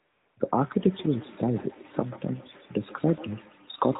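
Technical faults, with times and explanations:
0.00–0.36 s, AMR comfort noise: the phone sent no speech frames, so the receiver filled the gap with smooth synthetic noise in place of the real background.
0.95–3.99 s, feedback echo between two devices: a second device replays this microphone's signal, which is picked up again, returning each word roughly every 150 ms, peaking about 17 dB below the speech.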